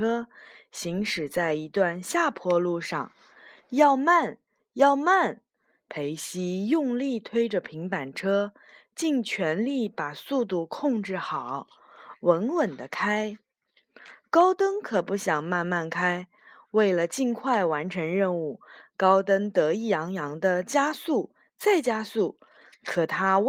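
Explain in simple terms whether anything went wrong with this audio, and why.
Nothing went wrong here; the speech simply went through ordinary Opus voice compression, which leaves only a light, normal trace on the sound.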